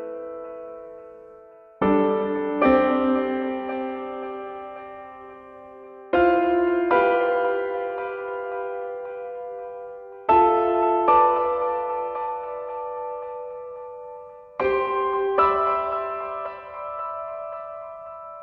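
No technical faults can be heard anywhere in this recording of sounds. Nothing in the audio stands out as a fault.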